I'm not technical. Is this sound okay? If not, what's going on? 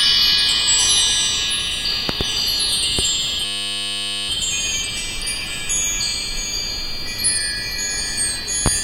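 No, there are a couple of problems. First, a few loud pops: a double pop around 2.09 to 2.24 seconds, a single one at about 2.99 seconds, and another right near the end at about 8.66 seconds. Each is a sharp, sudden crack sitting on top of the sound, which keeps going underneath. These are likely caused by a brief electrical jolt, like a plug being nudged, a switch, static, or a hiccup in the audio driver.

The second problem is a system hang loop from about 3.45 to 4.29 seconds. The computer briefly froze, but the sound hardware kept replaying the same tiny scrap of audio, just 10 milliseconds long, over and over, about 84 times. Because that scrap is so short, it repeats 100 times a second, so instead of a stutter you hear a steady buzz. That fits a small playback buffer. Once things unfreeze, the sound picks up with essentially nothing missing.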